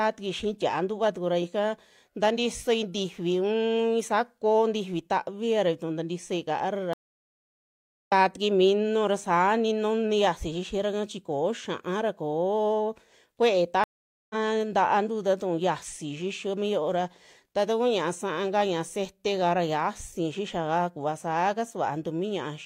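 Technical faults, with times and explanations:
6.93 to 8.12 s, stream reconnect: about 1.1 s of silence as the link drops, then the speech picks up roughly 0.7 s further on, with the fresh decoder easing in.
13.84 to 14.35 s, stream reconnect: a shorter break, about 0.46 s of nothing, and the speech comes back roughly half a second later in the stream, skipping that stretch.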